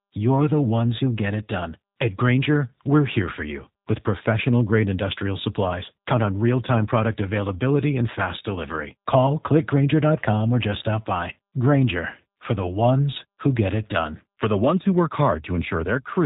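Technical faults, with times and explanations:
Throughout, G.729 codec: the speech sounds plainly rough and somewhat synthetic, which fits an 8 kbit/s coder. Each 10 ms frame is rebuilt from a vocal tract filter, a pitch predictor and a few excitation pulses per half-frame rather than from the original waveform. On a spectrogram, nothing appears above 4 kHz, leaving a flat empty ceiling, and the harmonics look smeared. The waveform looks coarser and more pulse-driven.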